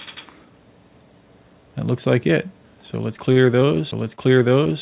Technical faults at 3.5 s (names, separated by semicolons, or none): repeated packet loss (robotic sound)